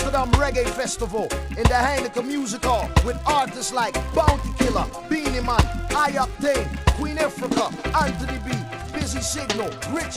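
A 100 Hz buzz that follows the signal's level runs under the audio throughout. This is a filter restarted on every block, its reset transients recurring at that rate.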